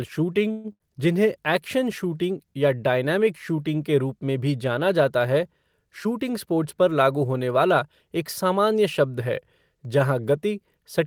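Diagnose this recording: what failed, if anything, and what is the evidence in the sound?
The network and jitter buffer stage failed first, at 0.51 to 0.67 s. The speech stops and the last sound is stretched into a fading buzz or hiss for about 128 ms, then resumes exactly where it left off. This is a call audio freeze, likely from packets held up in transit until the jitter buffer ran dry. Nothing is lost; a gap has been inserted and the whole stream now runs about 128 ms later. That is what separates it from a loss burst.

Right after, at 0.72 to 0.83 s, comes a burst of packet loss, again at the network stage. About 80 ms of speech never arrived in time. The receiver bridged roughly 76 ms by holding the last sound and letting it fade. When the speech returns it has jumped ahead, so a piece is skipped rather than delayed. That skip is the clue that rules out another freeze.

From 6.05 to 7.25 s the jitter buffer sped up. 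Having built up surplus delay, the receiver cut short pitch-period slices over and over, dropping about 150 ms in total. The speech runs about 10% fast and sounds hurried, yet pitch is unchanged. That rules out a sample-rate mismatch, which would raise pitch. There are also no dropouts, which separates it from packet loss.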